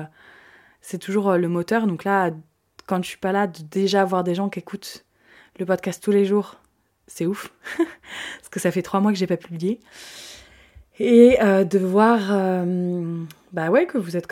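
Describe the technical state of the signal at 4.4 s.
At 4.38 s there is a bit error spike, one sample long, just after "de déjà avoir des" and before "qui écoutent le podcast". A single flipped bit throws that sample off by a power of two, reaching about -27 dBFS. It sounds like one sharp, broadband tick.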